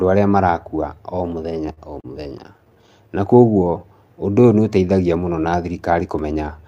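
Repeated stalls (stutter) run from 1.49 to 2.90 s, just after "marakua o". Packets reached the receiver late or more slowly than playback consumed them, so the jitter buffer kept running dry. Each time, the last sound was stretched to cover the gap. That happened 17 times across the span, with pauses of up to 39 ms, adding about 244 ms of filler, roughly a sixth of the stretch. Nothing is lost, but the speech drags and stutters.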